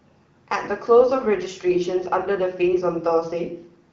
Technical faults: none

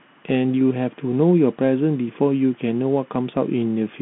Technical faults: Bluetooth CVSD headset codec

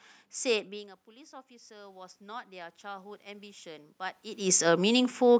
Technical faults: automatic gain rising

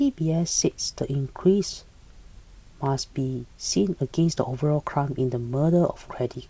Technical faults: none

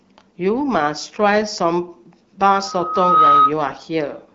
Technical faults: loudspeaker feedback squeal; AMR bit errors

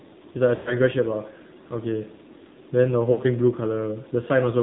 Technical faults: AMR narrowband mobile codec; lost AMR speech frames

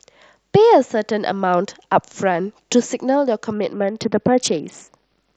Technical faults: Bluetooth SBC bit pool drop

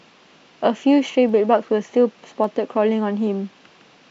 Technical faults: dropped samples

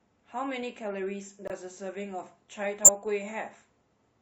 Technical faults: corrupt frame muted; corrupt frame decoded

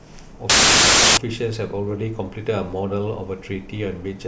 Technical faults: file tags played as audio

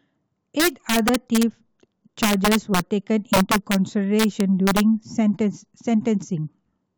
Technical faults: integer overflow

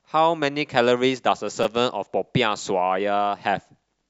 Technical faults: repeated buffer

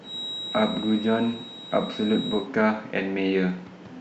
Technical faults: feedback whistle

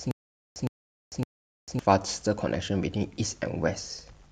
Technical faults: stutter with silent gaps

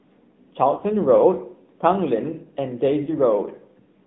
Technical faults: AMR narrowband mobile codec; lost AMR speech frames

